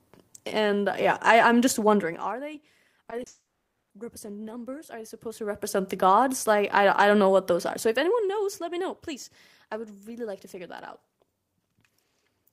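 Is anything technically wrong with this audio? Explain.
Yes. From 3.05 to 3.27 s the speech turns choppy and robotic: repeated packet loss left five short gaps, the longest 30 ms, each patched by stretching the preceding sound.

From 3.27 to 3.91 s a brief fading buzz or hiss gives way to about half a second of silence, likely a long network dropout, and the lost audio never returns.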